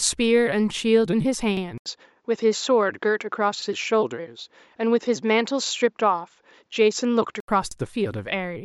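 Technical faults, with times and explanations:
1.57–1.62, 3.62–3.67, 5.67–5.71, 7.71–7.76 s, overlapping chunks: a brief stutter every 2 s, because each 2-second chunk starts early and replays about 48 ms of the previous one.
1.78–7.48 s, input switched to a poorer device: after an 80 ms gap the sound turns duller, with nothing above 7.6 kHz, the level about the same and a faint new background noise, likely from a narrower-band microphone.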